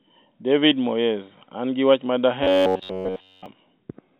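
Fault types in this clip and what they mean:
Robotic sound from repeated short buffers: From 2.44 to 3.46 s, after "gi wach ma", the speech turns into a rigid, metallic buzz at 93.8 Hz. All of it is repeated. It likely comes from late audio being patched by looping a 10.7 ms buffer.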